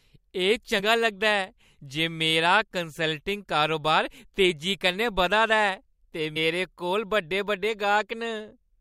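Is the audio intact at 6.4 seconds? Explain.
No, not quite: at 6.36 s, just before that point, there is damaged data in a compressed stream. The decoder misreads the corrupt frame and loses sync, producing a brief blip. A spectrogram shows a thin vertical smear; the waveform shows an abrupt discontinuity.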